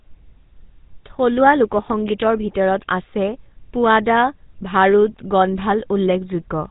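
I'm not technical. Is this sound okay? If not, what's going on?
No, not fully. The speech has passed through the GSM full-rate codec, the old digital mobile-phone system. It rebuilds the voice from a simple model of the throat and mouth, driven by a stream of pulses. That gives the buzzy, gravelly roughness you hear all the way through. It also throws away everything above about 3.8 kHz, so the sound is narrow and muffled, like a phone call. The damage is plainly audible from start to finish.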